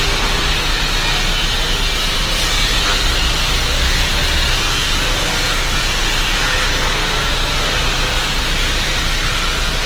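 From start to finish, the sound carries plainly audible Opus compression damage. Textures turn grainy, rough and noisy, with less swirling than MP3 would give. Starved bands are filled with folded or synthetic noise. Full bandwidth survives, to about 20.1 kHz. The likely cause is Opus music mode at a low rate, which fits about 16 kbps.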